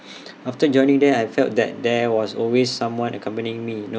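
No technical faults can be heard anywhere in the recording, and the signal stays steady and intact throughout.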